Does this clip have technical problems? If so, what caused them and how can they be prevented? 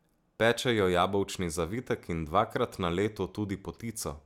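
No, this clip has no technical problems, so there is nothing to prevent.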